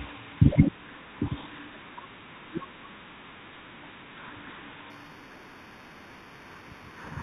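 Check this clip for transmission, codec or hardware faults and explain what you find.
One fault is present: imaging from linear upsampling, from 4.90 s to the end at 7.22 s. The sound was raised to a higher rate by joining samples with straight lines. That interpolation filters poorly. The top of the original band, just below about 4 kHz, is dulled. A mirrored copy of the speech spectrum leaks into the 4 to 8 kHz region, roughly 20 dB below the signal. This fits an 8 kHz source upsampled to 48 kHz. Sibilants carry a faint metallic shimmer.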